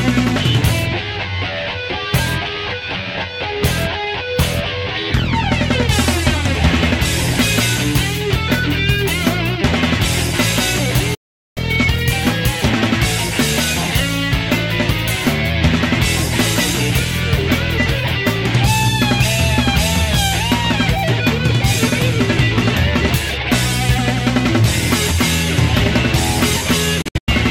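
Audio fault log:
11.14–11.58 s: digital broadcast dropout. The receiver lost good frames, muted with a quick 8 ms fade, then recovered, leaving a hole of about 0.42 s.
27.02–27.29 s: digital broadcast dropout again, this time as several short holes over about 0.26 s, the longest 96 ms.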